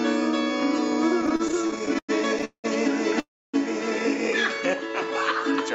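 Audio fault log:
1.21–2.66 s, repeated stalls (stutter): packets kept arriving late, so the jitter buffer emptied 20 times and the receiver stretched the last sound, gaps up to 192 ms, so the audio drags.
3.20–3.55 s, call audio freeze: packets were likely held up and the buffer ran dry, so the last sound is held and fades, with about 270 ms of silence before the audio resumes.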